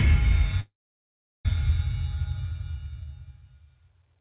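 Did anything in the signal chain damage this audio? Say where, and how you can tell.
Yes, at the network stage. From 0.6 to 1.46 s a call audio freeze interrupts the sound: the last sound trails off briefly, then about 0.74 s of silence follows. The sound then resumes exactly where it stopped, with nothing skipped. This was likely jitter-buffer underrun from delayed packets rather than a dropout, which would lose material. The 4 kHz ceiling comes from the G.711 call codec.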